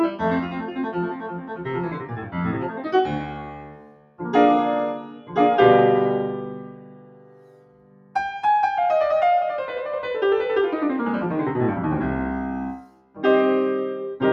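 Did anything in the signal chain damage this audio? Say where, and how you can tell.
Yes. The call-processing stage left a speech noise suppressor running on this music. It treats sustained tones and reverb as noise. Held notes sink and tails shorten, while attacks pass. Level pumps throughout, by roughly ten decibels.

The sound cut by the noise suppressor is clearest at 0.42–1.69 s, 1.88–2.9 s, 3.09–4.2 s, 4.98–5.37 s, 6.45–8.15 s and 12.81–13.24 s. Sustained passages drop by about 9 to 10 dB. Decays are cut short as the gain clamps down.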